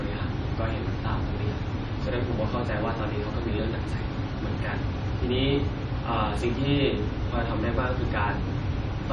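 Throughout, the speech shows heavy MP3 compression: nothing above 11.2 kHz, watery swirling where weak frequency lines drop in and out, likely from a bitrate near 32 kbps.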